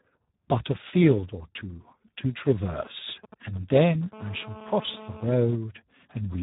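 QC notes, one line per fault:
Throughout, Speex codec: the speech sounds hoarse, grainy and buzzy, with nothing above 3.8 kHz. This is heavy damage from Speex running at a low quality setting, consistent with roughly 8 kbps. At that rate the CELP coder has very few bits left to describe the excitation, so the fine detail of each sound is replaced by a coarse, noisy approximation. The top band is simply missing.
2.76 to 4.05 s, GSM signalling bursts: a galloping dit-dit-dit of short buzzes sits well below the speech, roughly 15 dB down. A nearby 2G phone is signalling, as it does before a call or text arrives, and sends brief clusters of radio bursts repeating at about 217 Hz. The audio circuit rectifies that RF into audible buzz that follows the on-off grouping.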